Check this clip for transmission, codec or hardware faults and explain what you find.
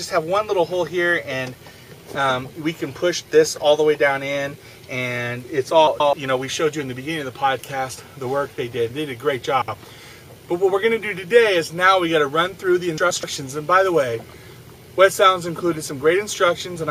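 There are three instances of frames out of order, at 5.87 to 6.13 s, 9.62 to 9.75 s and 12.98 to 13.24 s. In each, two adjacent blocks of frames were received in swapped order and decoded as they arrived, so the halves play exchanged: 128 ms blocks in the first and third cases, 64 ms blocks in the second. Each stretch sounds like a brief garbled flutter, and the timing after each stays intact.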